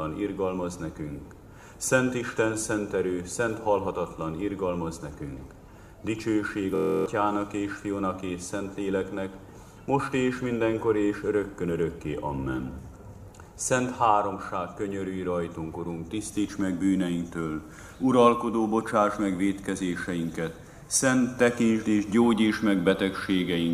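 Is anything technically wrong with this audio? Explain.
Yes. From 6.76 to 7.06 s the audio turns into a steady mechanical buzz at about 43 Hz, the sound of a system hang loop. The computer or its audio driver stalled while the sound hardware kept replaying its ring buffer, so one 23.22 ms slice repeats exactly 13 times, which fits a 1024-sample buffer. The loop replaces roughly a third of a second of the real audio.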